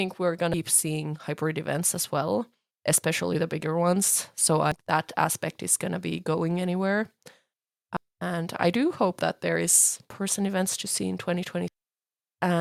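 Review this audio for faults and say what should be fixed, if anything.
Five short glitches from damaged data in a compressed stream, at 0.54 s (just before "seeing hybrid events as"), 4.72 s (before "that aspect is gonna"), 7.97 s, 10.1 s (after "hope that there is") and 11.68 s. Each time corrupted bytes throw the decoder off, it loses frame sync and skips ahead to the next header. To prevent it, re-fetch the file from a clean source and checksum transfers.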